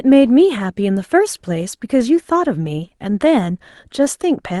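The sender's clock runs roughly 1.5 percent slower than the receiver's, so the jitter buffer keeps draining and the receiver must stretch the incoming stream to avoid running dry. This clock drift between sender and receiver is present through the whole speech clip as a faint unsteadiness in timing.

From 0.10 s to 4.26 s the receiver makes repeated timing corrections, repeating short pieces to stay in step. The speech plays at about 99 percent speed, adding roughly 50 ms in total, heard, if at all, as slight hiccups and a marginally dragging tempo, carried through the Opus call path with its 12 kHz band limit.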